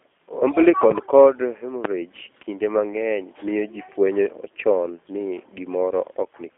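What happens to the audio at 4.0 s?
At 4.0 s, as throughout, the G.729 codec resynthesises the speech from a vocal-tract model in 10 ms frames, leaving a rough, synthetic, band-limited sound with nothing above 3.5 kHz.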